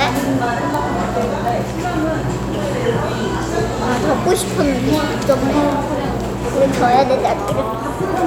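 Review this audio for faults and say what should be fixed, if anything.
Three bit error spikes, at 0.74 s, 1.48 s and 5.32 s, each a single flipped bit in one sample, so the value jumps by a power of two and snaps back. Each is one sharp tick that follows nothing in the sound. On the waveform, each shows as a lone one-sample needle, and on the spectrogram as a thin vertical line across all frequencies. Prevent this with error-checked, ECC-protected storage and transfer links.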